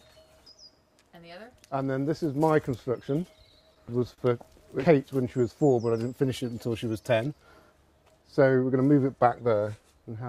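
From 3.23 to 4.20 s there are repeated stalls (stutter): packets ran late, the jitter buffer emptied eight times, and the receiver stretched the last sound across 104 ms of waits, the longest 42 ms. Nothing's lost, but it drags.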